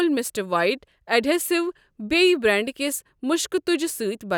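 No technical fault can be heard anywhere in the speech recording; the signal stays continuous and steady throughout.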